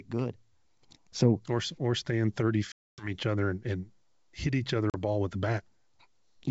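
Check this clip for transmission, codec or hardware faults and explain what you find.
There's packet loss on an ADPCM call here, twice: from 2.72 to 3.11 s, between "or or stand thirty" and "other and and hit", and from 4.90 to 4.95 s, between "and hit each other" and "ball with the". The first hole drops about 260 ms, which points to something like fifteen packets; the second about 40 ms. Silence fills each gap abruptly, then the decoder's predictor and step size resume out of sync with the sender, so the sound comes back with a brief level or distortion wobble before settling. The G.722 wideband coding at 64 kbit/s underneath stays clear.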